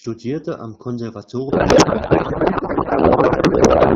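From 1.49 s to the end, a codec payload misread takes over: octet-aligned AMR frames are being parsed as bandwidth-efficient, so every field lands at the wrong bit offset. The speech turns into garbled noise and warble that barely tracks the original. Before that, the AMR-WB path sounds clear, consistent with about 12.65 kbit/s.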